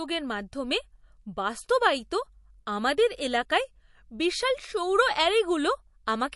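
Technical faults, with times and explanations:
Throughout, MP3 compression: the speech sounds watery and swirly, with nothing above about 11.3 kHz and sibilants turning metallic. The likely cause is a low-bitrate MP3 encode, which fits roughly 48 kbps, where weak frequency lines drop in and out between frames.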